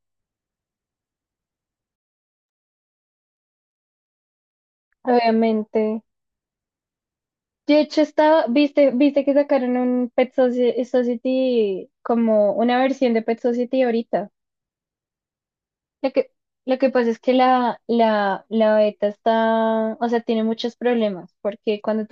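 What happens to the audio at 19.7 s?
Nothing goes wrong at 19.7 s; the speech carries on intact through that moment, with no dropout, click, distortion or other audible fault.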